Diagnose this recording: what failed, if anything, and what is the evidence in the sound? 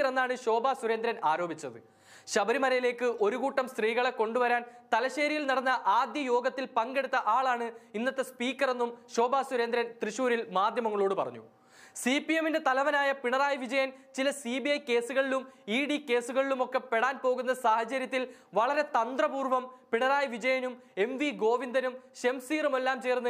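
Nothing failed; no faults heard.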